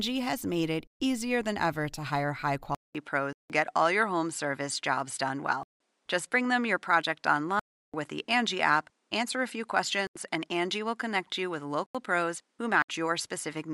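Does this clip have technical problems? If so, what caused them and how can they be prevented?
Yes. From 2.75 s onward, the input switched to a poorer device, likely a change of microphone or a headset call profile. A 200 ms silence marks the switch. After it, nothing is heard above 11.4 kHz, and a new background noise sits about 50 dB below the speech, at the same level. That new noise floor and the gap set it apart from a simple filter or EQ change. Locking the recording device in the system and disabling automatic switching prevents this.

There are also blocks of digital silence: 0.17 s at 3.33 s and 5.63 s, 0.34 s at 7.60 s, 0.085 s at 10.07 s and 11.86 s, and 0.064 s at 12.82 s. Each drops to silence with no fade, unlike a smoothed network dropout. Most of the lengths fit buffer multiples of 4096 samples, which points to the program failing to fill buffers in time. Larger buffers and less load on the recording process prevent this.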